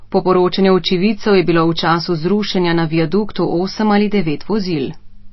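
Speech with plainly audible MP3 compression throughout, likely from a low bitrate near 24 kbps: watery, swirly texture, and a spectrogram shows a hard ceiling at 5.8 kHz with flickering gaps below.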